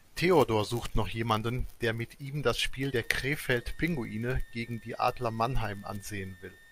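A switching power supply in this speech recording runs in an audible burst mode or beats with another supply from 2.80 s to the end, adding a switching supply whistle around 2 kHz, drifting between 1.78 and 1.93 kHz, sitting roughly 30 dB below the voice.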